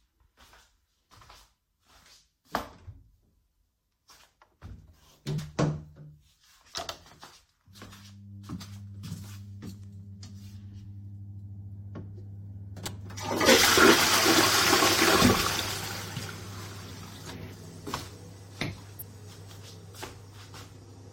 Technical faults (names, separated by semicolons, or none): compressed frames skipped; corrupt frame decoded